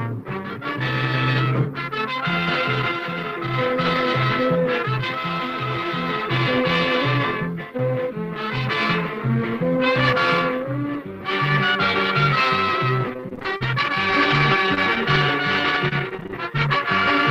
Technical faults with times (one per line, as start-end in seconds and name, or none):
13.13-17.11 repeated packet loss (robotic sound)